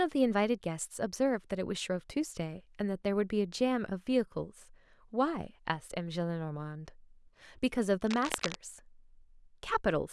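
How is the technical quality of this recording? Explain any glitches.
One glitch stands out: cable scratch noise from 8.05 to 8.55 s, dense, uneven rustling only slightly below the speech, likely from a worn connector or lead shifting. Unlike steady hiss, it comes in irregular bursts.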